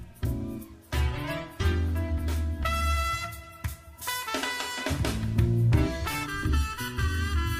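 From 6.26 s to the end, the audio turns hollow and phasey, a sign of channel delay (comb filtering). One channel arrives late by about 0.7 ms, and when the pair is folded to mono the shared content cancels at evenly spaced frequencies, the first notch sitting near 700 Hz. Unlike flanging, where the notches sweep, these notches hold still, and unlike a plain EQ cut, the dips repeat regularly across the spectrum.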